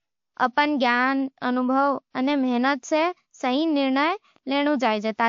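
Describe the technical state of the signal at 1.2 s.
At 1.2 s the speech sounds dull above 11.2 kHz and carries layered artefacts from both codecs heard together, as throughout the clip, which fits a likely transcoding between lossy codecs, a low-rate MP3 re-encoded to WMA.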